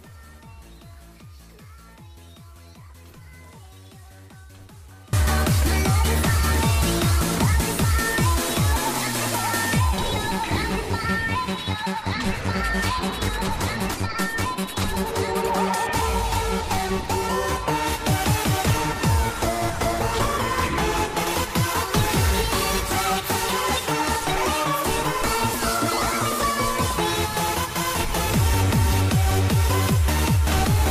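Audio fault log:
0.00–5.13 s: audio dropout to a faint residue, already under way as the clip opens. Only a faint leak of the sound remains, roughly 25 dB down, then full level returns abruptly; unlike a fade or pause, the path stays live, likely a break upstream of a still-open input.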